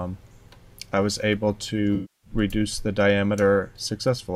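From 1.95 to 2.30 s, an AAC frame loss with concealment occurs. About 280 ms of coded data went missing, roughly a dozen frames' worth. The decoder rebuilt the gap from the last good spectrum, so that stretch turns smeared and noisy before the sound resumes.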